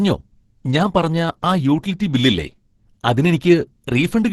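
Opus compression, the likely cause, runs throughout: hybrid-mode coding, fitting about 12 kbps, removes everything above 12.1 kHz, leaving the speech muffled, hoarse and grainy.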